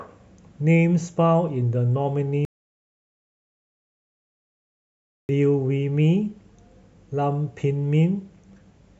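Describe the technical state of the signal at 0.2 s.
At 0.2 s the speech signal is intact, with no audible technical fault at that point.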